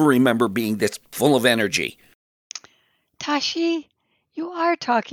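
Pre-emphasis left on runs from 0.0 to 3.59 s: the speech carries an FM-style 50 µs treble boost whose matching de-emphasis was never applied, leaving 10 kHz about 10 dB hotter relative to 1 kHz, so it sounds thin, bright and sharply sibilant.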